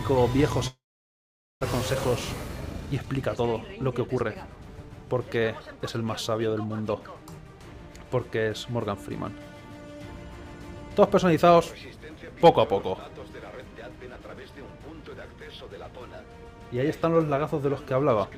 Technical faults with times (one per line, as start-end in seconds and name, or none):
0.67-1.65 long network dropout
2.48-4.66 jitter buffer speed-up